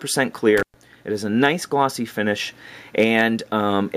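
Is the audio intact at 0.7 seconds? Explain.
No. At 0.7 seconds the signal sits inside an intermittent contact fault spanning 0.57 to 0.74 s: a loose plug or cable connection briefly opens, dropping the audio for about 114 ms, with crackle as the contact breaks and remakes.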